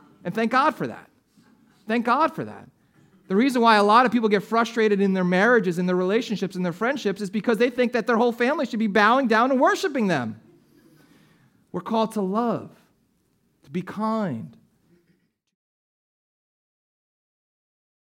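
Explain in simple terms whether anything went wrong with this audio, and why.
Nothing went wrong here.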